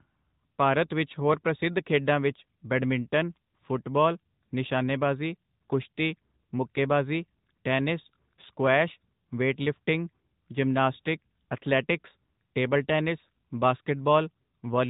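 Speech throughout sounds boxed-in and plainly buzzy and synthetic, with nothing above 3.8 kHz, marking the AMR narrowband mobile codec at a rate consistent with about 10 kbps.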